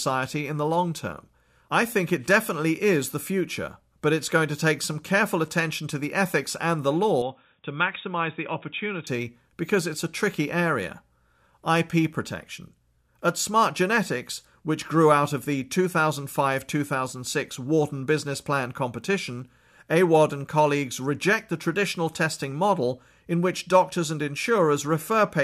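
From 7.22 to 9.07 s, speech turns dull, with nothing above 3.8 kHz, and drops about 5 dB. Input likely switched to a poorer device.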